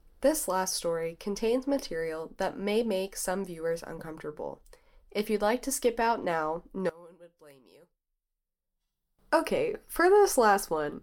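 After "to skip out now", from 6.89 to 9.19 s the speech falls by about 23 dB, likely one channel inverted, so the shared centre cancels when summed to mono.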